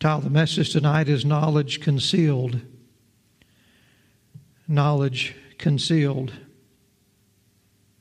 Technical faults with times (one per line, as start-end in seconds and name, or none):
none